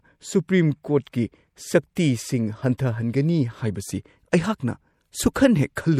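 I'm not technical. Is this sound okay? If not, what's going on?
No. The speech was likely squeezed by MP3 compression, which throws away detail and cuts everything above 17 kHz, leaving it plainly watery.

Pre-echo: the compressor smears noise backward before sudden sounds, so a brief hiss leads them at 0.48, 1.95, 2.78 and 5.34 seconds.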